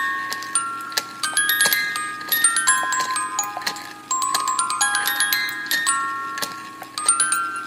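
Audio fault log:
0.84 to 0.90 s, corrupt frame decoded. A short burst of noise with a squeaky, chirping edge cuts across the sound for about 50 ms. Flipped bits inside a few compressed frames were decoded anyway. The decoder misread gains and codes, so energy landed at wrong frequencies. Because the damage is confined to those frames, the artefact starts and stops abruptly. It peaks at roughly -20 dBFS.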